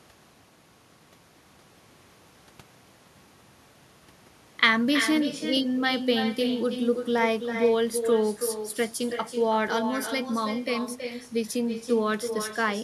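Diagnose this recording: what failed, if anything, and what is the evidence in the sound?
Every phrase of the speech is trailed, throughout, by a quieter, thinner copy arriving about a third of a second later, at about 7 dB below the direct sound. This is echo with no canceller, a call-processing failure: the far end's loudspeaker feeds its microphone, and nothing subtracts it before the network returns it.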